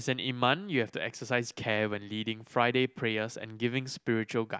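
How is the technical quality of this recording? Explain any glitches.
No glitches can be heard in the recording; the speech signal runs continuously, with no technical faults anywhere in it.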